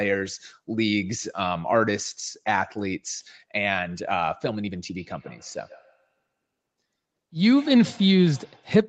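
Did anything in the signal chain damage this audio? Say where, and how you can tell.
Yes. From 4.9 s to 8.8 s the speech is followed by a feedback echo between two devices, a failure in the call processing stage. Each phrase returns about every 150 ms, peaking about 25 dB below the direct speech. That fixed spacing points to an acoustic loop. A second device in the room replays the call audio, and this microphone picks it up again. The local echo canceller only removes its own playback, so the repeat passes through. The call microphone processing itself, with nothing above 8 kHz, works as intended.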